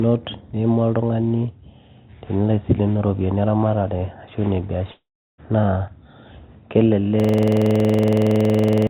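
From 4.92 to 5.40 s, the speech trails into a fading buzz, then near-silence. This is a long network dropout, likely lost packets, costing nearly half a second.

From 7.20 to 8.87 s, a system hang loop repeats one 46 ms slice about 36 times. The 21.5 Hz stutter fits a 2048-sample buffer, and about 1.5 seconds of audio are lost.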